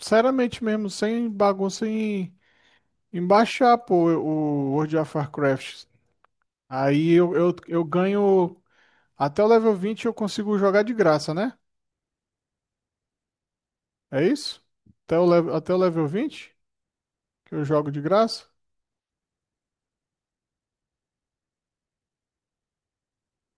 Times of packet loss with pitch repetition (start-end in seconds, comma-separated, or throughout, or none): none